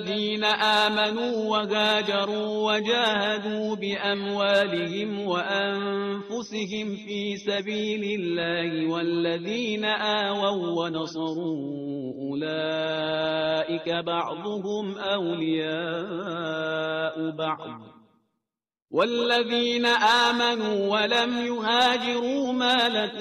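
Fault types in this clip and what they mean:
No technical faults can be heard in this recording, and the signal shows nothing that calls for a remedy.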